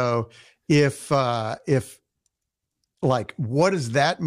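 A short speech recording with nothing technically wrong to be heard. No faults turn up anywhere in it.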